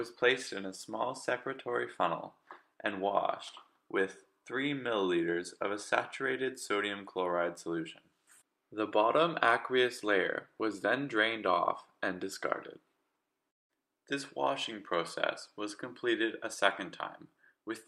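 Nothing stood out as a technical problem on listening to this audio.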